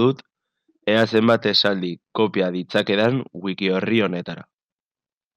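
Speech with hard clipping at 0.95–1.67 s (about 3 dB over), 2.76–3.05 s (about 2 dB) and a single tick at 3.98 s, where peaks exceed what a stage can pass and are sliced flat. Unlike soft saturation's rounded warmth, the flat tops give crisp, bright crackle.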